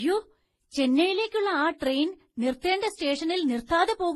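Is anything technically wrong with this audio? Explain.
Yes, one problem runs through the whole clip: transcoding between lossy codecs, likely a low-bitrate MP3 re-encoded to HE-AAC, then Vorbis. Each stage's artefacts stack, and nothing survives above 12.8 kHz.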